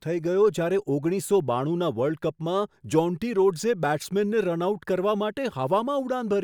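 No technical faults can be heard anywhere in this recording.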